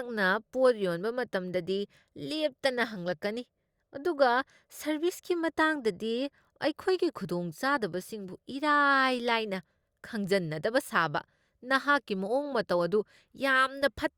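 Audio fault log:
No faults heard in this speech.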